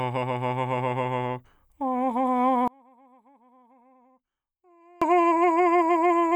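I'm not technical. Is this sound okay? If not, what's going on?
No. From about 2.68 to 5.02 seconds the music suddenly drops to a faint trace and then returns. This sounds like one channel inverted. The likely cause is that one of the two stereo sides has been flipped upside down, so when both sides are combined into one, everything they share cancels itself out. The centre of the mix almost disappears, leaving only the small differences between the two sides.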